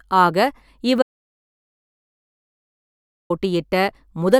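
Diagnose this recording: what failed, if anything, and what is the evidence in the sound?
Audio dropout to silence from 1.02 s to 3.30 s: the speech cuts off mid-flow and about 2.28 s of silence follows, with no room tone, before sound resumes. The likely cause is a lost input link or mute upstream, with the recorder writing silence.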